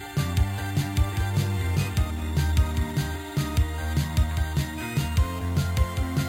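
A bright, metallic fizz follows the music's level throughout, its lowest band sitting between 5.5 and 11 kHz at about 21 dB below the signal. This is imaging from sample-and-hold upsampling: samples were repeated without smoothing, fitting an 11 kHz to 44.1 kHz rate change, so mirrored spectra remain.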